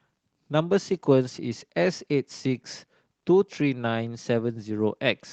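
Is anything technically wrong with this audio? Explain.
No, nothing is technically wrong with this audio.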